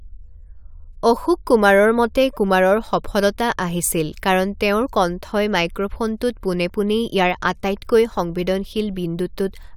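No technical faults are audible.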